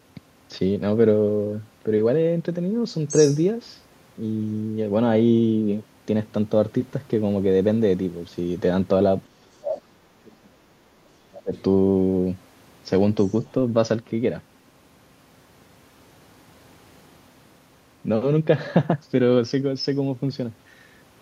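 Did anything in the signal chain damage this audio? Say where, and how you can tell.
Yes, in call processing. The other side's voice leaking through is heard at 3.08–3.41 s, about 10 dB under the talker. Fainter scraps follow at 11.54–11.62 s and 13.26–13.52 s, some 30 to 35 dB down. An echo canceller likely failed to remove loudspeaker sound picked up by the microphone.

Speech suppressed in double talk also occurs. The talker's level collapses from 9.27 to 10.7 s, by about 35 dB at its deepest. It drops again from 11.14 to 11.53 s, by about 25 dB. Both sides were likely talking at once, so the canceller turned everything down.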